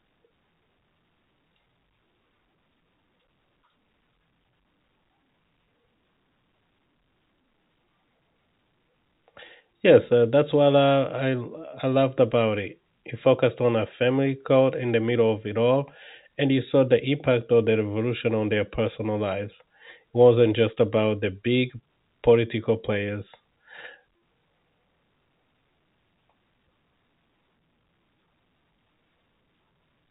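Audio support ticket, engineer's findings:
No faults found: speech over G.711 telephone coding, with nothing above 3.8 kHz.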